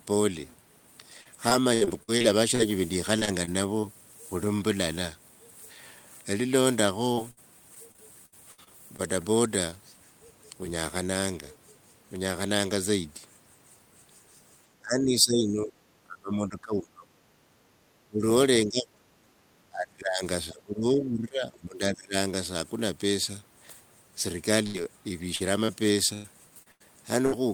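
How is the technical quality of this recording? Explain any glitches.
The recording has clear network and echo-control faults. Several stretches are choppy, and the talker is repeatedly turned down in the middle section.

Repeated packet loss (robotic sound) occurs from 1.21 to 3.85 s, 7.13 to 9.00 s and 25.36 to 27.34 s. Short holes, up to about 60 ms in the first two stretches and up to 105 ms late on, are patched by extending the last sound. The speech turns choppy and robotic.

Short concealed packet loss occurs at 9.70 s. About 20 ms is missing and filled in. It is heard as a brief smear or wobble.

Speech suppressed in double talk occurs at 14.80 to 15.74 s, 16.05 to 17.19 s, 18.08 to 18.22 s, 18.66 to 19.04 s, 19.69 to 20.22 s and 20.51 to 22.15 s. The speech dips by roughly 20 to 30 dB. The likely cause is an echo canceller turning down both sides while they overlap.

The background is gated by the echo canceller at 17.69 to 17.80 s. 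The room sound drops about 8 dB for a moment, then returns.

A burst of packet loss at 24.66 to 24.76 s removes about 80 ms. The sound is held and fades, then jumps ahead with that part missing.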